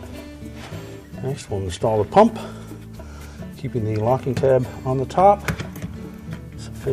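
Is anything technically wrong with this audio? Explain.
No, no technical faults.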